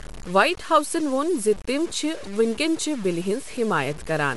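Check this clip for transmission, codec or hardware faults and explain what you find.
Two faults run through the entire speech clip, one from coarse quantisation and one from a low-rate Bluetooth codec.

Low bit depth without dither, from start to finish. The samples appear to have been cut to very few levels, which points to about 6 bits, and they were likely truncated rather than dithered. Because the rounding error tracks the waveform instead of being randomised, it comes out as distortion rather than steady hiss. The error sits only about 20 dB below the speech, so quiet syllables and decays turn gritty and sputtery, and the grain shifts as the sound changes.

Bluetooth LC3 compression, also throughout. The sound likely passed through the LE Audio LC3 codec at a rate that fits a 48 kbps stream with 10 ms frames. At that rate the encoder zeroes much of the upper spectrum and fills the gaps with synthetic noise. 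The result is a plainly audible breathy, grainy edge on the speech, and the band ends abruptly, with nothing above 11.6 kHz.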